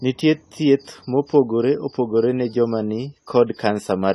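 Throughout, the speech sounds dull and smeared, with nothing above 14 kHz and a plainly audible fizzy warble on sibilants. That points to AAC compression, likely at a low bitrate near 32 kbps. A plain low-pass filter would darken the top without this warble.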